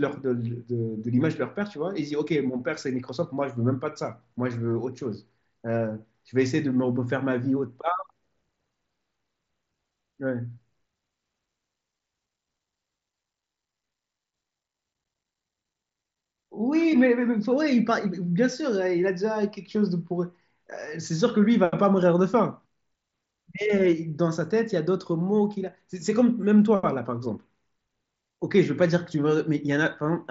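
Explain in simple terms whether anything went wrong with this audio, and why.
Nothing went wrong; the Bluetooth headset audio sounds normal.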